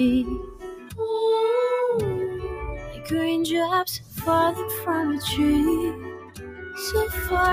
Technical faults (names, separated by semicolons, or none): noise suppressor applied to music or sounds; sound cut by the noise suppressor